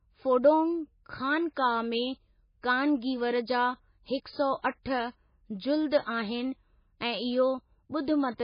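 Speech throughout the 8-second clip carries heavy MP3 compression damage, likely from a very low bitrate near 19 kbps. Nothing survives above 5.1 kHz, and weak components flicker between frames into a watery swirl, which a simple low-pass filter would never add.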